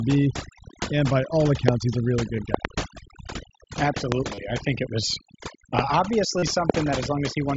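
Throughout, the background is almost silent with twinkling specks: overdone noise removal, which cut away frequency bands near the noise floor along with quiet speech detail.

At 1.68–1.71 s, between "by all" and "he's a really", a sharp loud pop jumps about 20 dB above the speech, likely a voltage step from a switch, plug or static discharge.

At 2.37 s a brief buzzy hold of about 15 ms marks concealed Bluetooth headset packet loss, where lost packets were filled by repeating recent waveform.

Between 2.54 and 2.67 s, two pops follow in quick succession at a similar level.

A further single pop lands at 4.12–4.14 s, just before "I think it was". At 4.35–4.38 s, just before that phrase, a buzzy 30 ms patch with a slight warble on recovery is another packet-loss concealment.

A pop sounds at 5.79–5.81 s. At 6.39–6.43 s the longest concealed gap, about 37.5 ms, holds a steady buzzy tone before the audio returns. 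A final pop follows at 6.70–6.72 s.

The wideband mSBC link passes speech up to 8 kHz, with light graininess on louder sounds.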